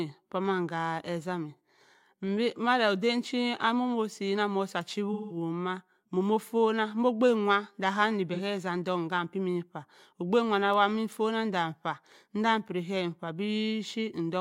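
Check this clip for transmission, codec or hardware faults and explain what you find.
The speech has AAC frame loss with concealment at 1.55–1.61 s, 5.13–5.37 s and 8.33–8.40 s. These gaps are 42.7 ms, 170.7 ms and 42.7 ms, which fits one, four and one lost frames. The decoder rebuilds each gap from the last good spectrum, so the short gaps sound smeared or phasey rather than clicking or dropping abruptly to silence like a plain dropout.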